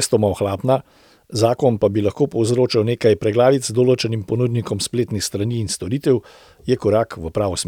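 No technical faults are audible.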